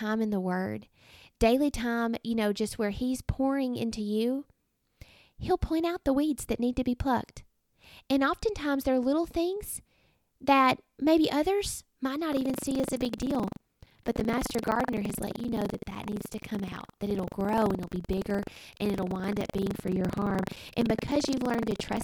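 From 12.29 s to the end at 22.03 s, buffer tearing sets in. The writing program and the playback hardware have drifted out of step, so they cross inside each buffer period. Around 15 percent of every buffer replays speech from roughly 100 ms earlier, with hard joins at both edges. The result is a robotic rattle at 23.4 Hz, which fits a 2048-sample buffer. It sounds only while speech is present.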